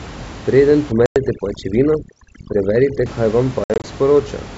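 A speech recording over a G.722 wideband call at what sounds like 64 kbit/s, with room noise about 16 dB below the speech. An overdone noise removal stage, set far too strong, acts from 0.92 to 3.06 s. It pushes any frequency band near its noise estimate down to almost nothing, so the background collapses into near silence sprinkled with twinkling specks, and the quieter parts of the speech are cut away with the noise. Packet loss on the ADPCM call strikes twice. From 1.06 to 1.18 s about 100 ms, a handful of packets, is dropped and filled with silence. The receiving decoder's predictor and step size then no longer match the sender's, so speech resumes after the sharp-edged gap slightly distorted before settling. From 3.64 to 3.84 s about 120 ms, several packets, goes missing in scattered pieces across 200 ms, the longest run 60 ms. This gives a choppy series of short holes, each followed by the same brief mistracking on recovery.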